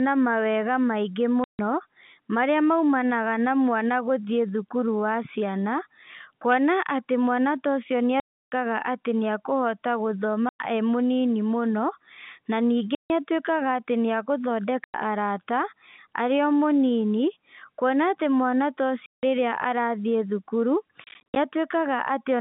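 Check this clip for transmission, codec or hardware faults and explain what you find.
The speech is chopped by packet loss filled with silence at seven points. There are clean dropouts at 1.44 to 1.59 s, 8.20 to 8.52 s, 10.49 to 10.59 s, 12.95 to 13.10 s (right after "mũno na"), 14.84 to 14.94 s, and 19.06 to 19.23 s (right after "kuona atĩ mwana ta"). From 21.04 to 21.36 s there is a cluster of shorter holes totalling 170 ms, the longest about 60 ms. Each hole starts and ends abruptly. The gaps come in steps of 100, 150, 170 and 320 ms, which fits 10 ms packets that never arrived and were replaced by silence. The band-limited telephone sound of the G.711 A-law line is heard throughout.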